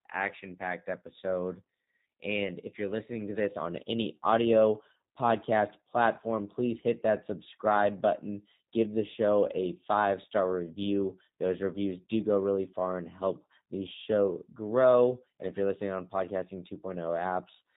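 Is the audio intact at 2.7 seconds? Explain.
No. At 2.7 s, as throughout, G.729 codec damage is plainly audible: speech rebuilt from a vocal-tract filter and sparse pulses sounds rough, synthetic and cut off above 4 kHz, consistent with 8 kbit/s.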